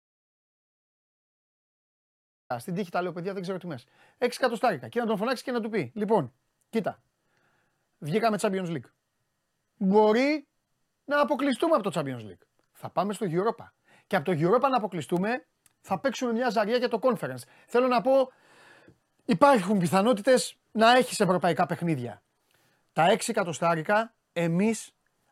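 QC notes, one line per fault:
0.00–2.50 s, audio dropout to silence: The clip opens already in a dropout, so the first 2.50 s is dead silence with no room tone beneath it. The speech then comes in abruptly, already in mid-flow rather than with a natural onset. The likely cause is a lost input, such as a disconnected device, a failed link or a stray mute, while recording carried on writing silence. Whatever was spoken during that gap is gone.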